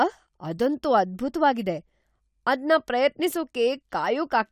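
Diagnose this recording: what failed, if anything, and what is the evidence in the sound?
Nothing failed in this recording, and the sound shows no evidence of a fault at any stage.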